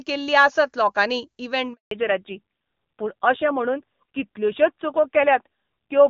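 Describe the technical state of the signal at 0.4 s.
At 0.4 s the speech is intact, passing through the AMR wideband (HD Voice) codec at 23.85 kbit/s with at most faint coding damage.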